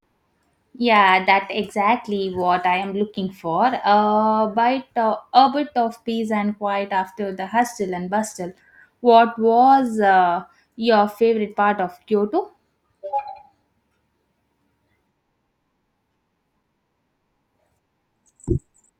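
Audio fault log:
15.52–18.29 s: CD scratch ticks, eleven brief clicks no longer than about 4 ms. A disc blemish defeats error correction each revolution, so samples are interpolated or muted.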